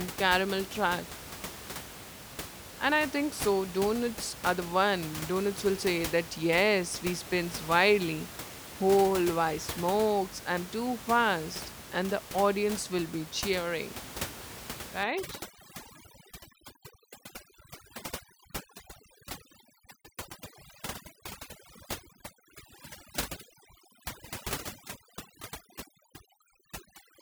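From 15.03 s to the end at 27.22 s, overdone noise removal sets in: bands near the estimated noise floor are pushed to nothing, so the room noise, about 13 dB below speech, collapses into twinkling specks. A spectrogram shows scattered isolated dots and holes.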